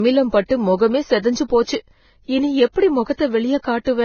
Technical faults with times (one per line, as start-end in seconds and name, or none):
0.00-4.04 low-bitrate audio saved at a high bitrate